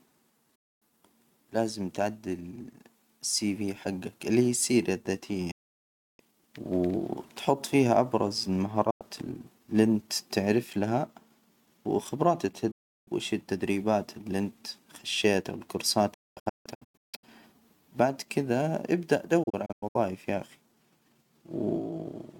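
Digital broadcast dropouts mute the speech at 0.55, 5.51 (after "اللي هي السيرة الذاتية"), 8.90 (after "فيها أبرز"), 12.71, 16.14 and 19.43 s (before "يا أخي"). The receiver lost good frames and silenced output with an 8 ms fade. The last two form scattered short holes.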